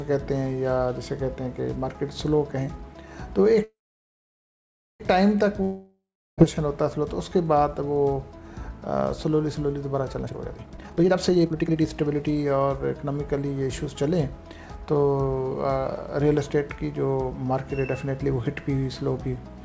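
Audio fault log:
3.64–5.02 s, call audio freeze: a fading buzz, then about 1.25 s of silence, resuming where it stopped; likely delayed packets emptying the jitter buffer, inserting a gap.
5.62–6.40 s, long network dropout: a fading buzz decays into about 0.33 s of silence, then resumes with 0.76 s of audio gone, likely because packets never arrived.
10.23–12.80 s, jitter buffer speed-up: the sound hurries along at 153% speed with pitch unchanged, as the receiver trims about one and a half seconds of excess buffered audio.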